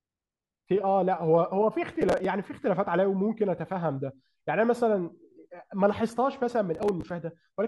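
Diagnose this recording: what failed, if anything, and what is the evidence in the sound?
Processor overload crackle appears from 1.92 to 2.25 s and again from 6.75 to 7.10 s, a gritty tearing laid over the speech that stops cleanly each time. This is a driver or buffer-stage failure. The processor fell behind, and a run of buffers, each around 5 ms, missed their deadlines. Each missed slot replayed stale audio with hard edges. Strung together, those repeated fragments produce the rapid crackle, with the second burst slightly longer.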